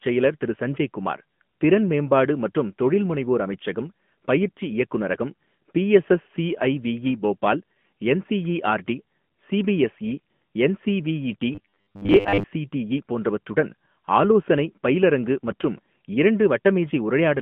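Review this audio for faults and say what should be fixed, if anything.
The speech runs through an AMR narrowband mobile codec throughout. Nothing passes above 4 kHz, and the line band is 150 Hz to 3.4 kHz. Audible buzziness fits a mid-rate mode near 10.2 kbps. Prevent this by recording or transmitting with a wideband codec.

Robotic sound from repeated short buffers occurs from 11.55 to 12.45 s, right after "போபால் என்சிஇஆர்டி சிபிஎஸ்இ என்சிவிஇடி". A rigid 100 Hz buzz points to a 10 ms chunk being replayed, with most of the real audio skipped. Late-arriving buffers are the likely cause. Prevent this with larger buffers or a more reliable audio path.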